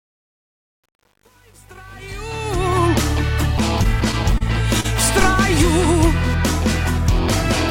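The audio opens with a fade-in that runs from the very start to 2.86 s, and that fade carries truncation distortion from 0.0 to 2.86 s, worst between 0.0 and 2.34 s. The gain stage keeps only about 9 bits with no dither, so the quietest part collapses into coarse square steps and sounds gritty. Repeated stalls (stutter) follow between 3.83 and 4.42 s. The jitter buffer ran dry five times as packets arrived late, and the receiver stretched the preceding sound to fill about 70 ms in total, the longest wait 26 ms, so nothing is lost but the passage drags and stutters. At 4.80 to 4.86 s there is a short stall from a late packet: a delay jump of about 37 ms emptied the buffer once, and the last sound is held for 37 ms before playback resumes where it left off, heard as a brief hang with a slight buzz or dip.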